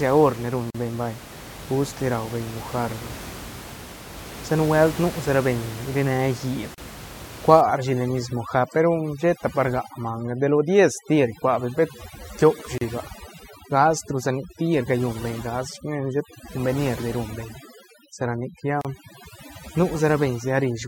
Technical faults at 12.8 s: overdone noise removal; gap at a join of encoded pieces

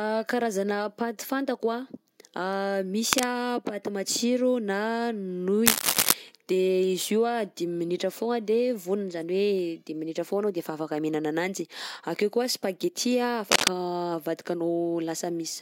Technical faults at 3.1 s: cable scratch noise

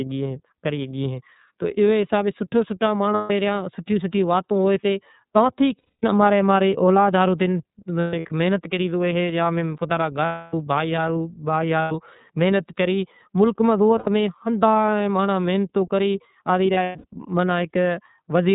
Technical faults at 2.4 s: iLBC codec

